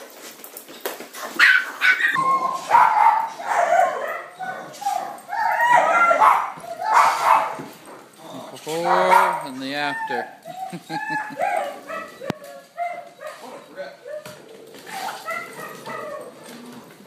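From the start to about 2.16 s, the opening section plays at the wrong speed, running at 1.73 times its proper rate. Because speed and pitch are locked together here, the sound is both hurried and raised by about ten semitones, close to an octave, giving it a thin, chipmunk-like quality. At 2.16 s it drops abruptly to normal rate and pitch. The likely cause is this segment being clocked at an incorrect sample rate during editing or playback.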